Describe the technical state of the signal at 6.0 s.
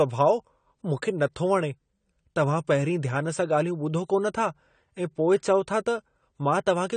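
At 6.0 s the speech carries the same damage as the rest of the clip: nothing is heard above 9 kHz, and codec artefacts are plainly audible. The likely cause is AAC compression, consistent with AAC-LC at around 32 kbps. Too few bits for each 1,024-line frame force a lowered cut-off, with gaps or substitute noise in the remaining bands. That separate in-band damage, not just a clean edge at 9 kHz, is what distinguishes it from a simple low-pass filter.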